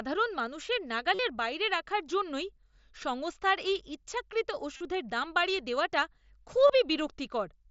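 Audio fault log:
1.14–1.19 s, 4.77–4.81 s, 6.67–6.70 s: concealed Bluetooth headset packet loss. Gaps of about 45, 38 and 23 ms are filled by repeating the best-matching recent waveform, giving a brief buzzy, steady-level tone and a slight warble on recovery, before "বাইরে রাখার জন্যই সংস্থার" and after "জন্যই সংস্থার এই ইচ্ছাকৃত" through the mSBC wideband link.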